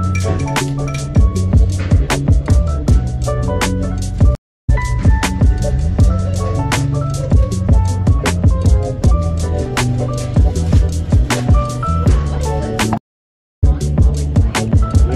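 Stream reconnects at 4.35 s and 12.98 s: the connection dropped, leaving 0.27 s then 0.58 s of silence, and a fresh decoder resumed roughly 0.2 s, then 0.4 s, later.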